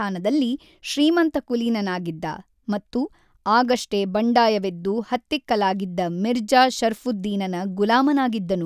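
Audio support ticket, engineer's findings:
No audible faults found.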